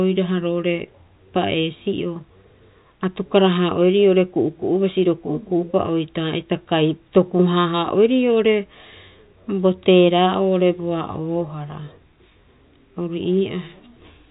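No technical faults are audible in this speech.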